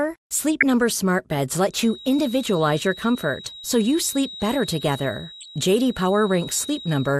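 Speech, dulled and gurgling throughout from MP2 compression, which fits a low rate around 80 kbps. Upper sub-bands drop out and the rest sound granular. DAB burbling comes at 0.60 to 0.63 s and again at 5.41 to 5.48 s. Bit errors reaching the audio data put short blips of noise in single sub-bands. From 1.67 s, just after "smart beds", a feedback whistle at 3.8 kHz sits about 20 dB below the speech until the end. The likely cause is a loudspeaker-to-microphone loop held just short of runaway.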